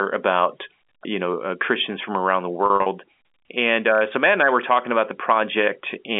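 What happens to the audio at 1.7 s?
Nothing goes wrong at 1.7 s: the speech there comes through intact, carried in the narrow telephone band of G.711 coding as it is throughout that stretch.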